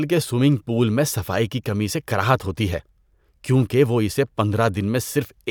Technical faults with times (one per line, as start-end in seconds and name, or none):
none